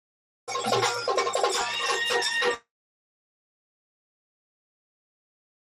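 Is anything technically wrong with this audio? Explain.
Yes. Throughout, the audio sounds dull and gurgly with granular grit, likely MP2 compression at a low rate, around 80 kbps, switching off upper sub-bands and coarsely quantising the rest.

From 1.61 to 2.07 s, DAB burbling adds short blips of noise in single sub-bands, as bit errors of roughly a tenth of a percent corrupt the audio data frame by frame.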